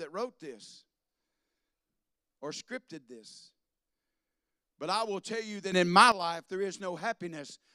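At 5.72 s the speech and background noise jump about 12 dB together until 6.12 s, a sudden gain jump, likely from a gain change applied without a ramp.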